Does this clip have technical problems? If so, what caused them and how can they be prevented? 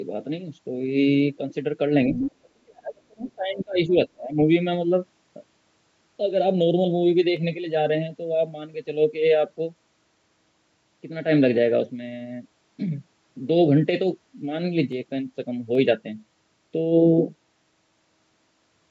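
Yes. Other side's voice leaking through appears at 2.15–2.32 s, nearly as loud as the speech, and again as a faint trace at 3.28–3.32 s. The likely cause is a loudspeaker's echo the canceller failed to remove. On a spectrogram it appears as a second, unrelated harmonic pattern overlapping the talker's. Using headphones prevents this.

Speech is suppressed in double talk between 2.34 and 4.37 s. The level falls by up to about 35 dB over roughly a second and a half in total, likely because the canceller could not separate the talker from the echo. The waveform envelope dips and the spectrogram darkens. Headphones or a canceller with better double-talk detection would prevent it.

Dropped samples produce single sharp clicks at 7.37, 14.92 and 15.75 s, each from a fraction of a millisecond of missing audio. The likely cause is a buffer glitch in the capture or transport chain. Each shows as a small step in the waveform and a thin vertical line across the spectrogram. 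Larger buffers and a stable clock prevent these.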